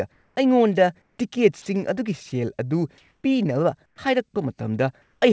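Between 0.12 and 0.36 s, and again from 1.02 to 1.18 s, the pause between phrases turns into comfort noise in place of the background. The real room sound, roughly 46 to 47 dB below the loudest speech, becomes a smooth, featureless hiss, about 1 dB and about 3 dB quieter. This likely comes from discontinuous transmission: the sender went quiet during the pause and the receiver filled the gap with synthetic noise. Only background is lost here, never speech.

At 1.62 to 1.66 s, and for 20 ms at 2.30 s, the sound is dropped by the voice detector. Speech itself, 40 ms and then 20 ms of it, is swapped for steady noise, likely because the detector mistook the sound for background. These gaps sit inside speech, unlike the comfort-noise pauses, so the sound briefly hollows out instead of only the room going flat.

Comfort noise returns from 2.98 to 3.24 s, this time about 2 dB louder than the real background. 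From 3.86 to 3.98 s it is about 8 dB quieter.

At 3.96 s the onset is clipped by the voice detector. The first 20 ms of the returning speech are missing, so it starts abruptly without its soft rise, likely because the detector was slow to trigger. Unlike the dropped sound earlier, only the beginning is lost.

The last comfort-noise stretch runs from 5.02 to 5.22 s, about 1 dB quieter. Throughout the clip, the call codec leaves nothing above 8 kHz.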